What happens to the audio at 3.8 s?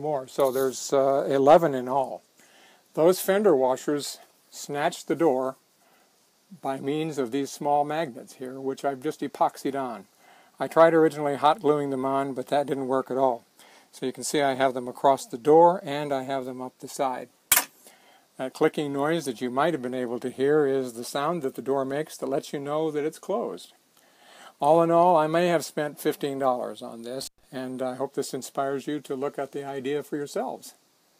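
Nothing goes wrong at 3.8 s; the audio plays through that moment intact, with no dropout, click or distortion.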